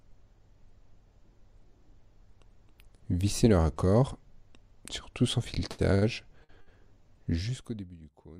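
Short stalls from a late packet occur at 5.71, 5.95, 6.44 and 6.61 s. Each time the jitter buffer ran dry and the last sound was held for 73, 71, 52 and 55 ms.

Zipper noise runs from 7.31 to 7.99 s. A drop of about 25 dB was applied in roughly 70 unsmoothed steps per second, giving an audible ticking zip.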